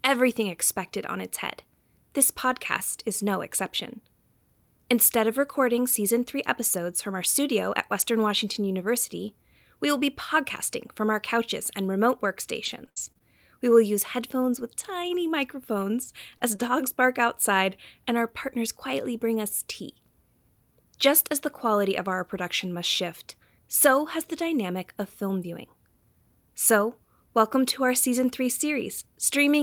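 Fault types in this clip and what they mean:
Scattered short gaps: between 12.65 and 16.60 s, after "our couches and remote" and before "bark outside and our", about seven tiny holes, the longest around 70 ms, are bridged by stretching the preceding sound, leaving ticks and smears rather than one clean silent dropout.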